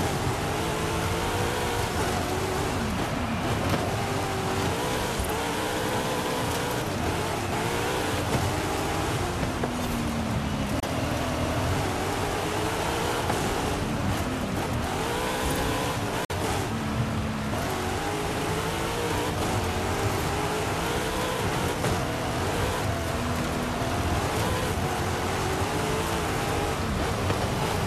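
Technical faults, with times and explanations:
10.80–10.83 s and 16.25–16.30 s, digital broadcast dropout: the sound fades out over about 3 ms into brief silences, consistent with the receiver muting after one and then two corrupted 24 ms frames. The audio in each gap is lost, not repeated.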